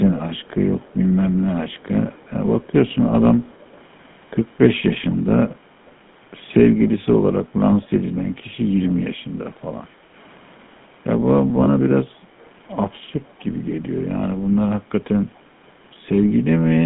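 Throughout, the speech carries the buzzy, gravelly roughness of the GSM full-rate codec. The voice is rebuilt from a vocal-tract model driven by sparse regular pulses, and only a narrow band of roughly 150 Hz to 3.5 kHz survives, which fits 13 kbps GSM. Unlike plain band-limiting, the damage is a grainy texture on the voice itself.

From 5.11 to 5.16 s, and again from 7.82 to 7.88 s, a faint scrap of the voice reappears 239 ms late, about 35 dB below the speech. This is most likely an echo leak from a loudspeaker whose canceller let a remnant through. The fixed delay marks it as a returned copy rather than reverberation.

From 11.64 to 11.68 s, lost GSM frames leave a brief metallic ring. The last good frame is held and repeated instead of the sound cutting to silence, so it registers as a smeared buzz rather than a clean dropout.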